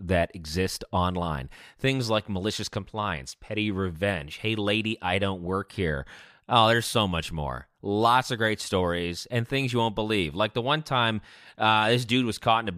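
No technical faults can be heard in this recording.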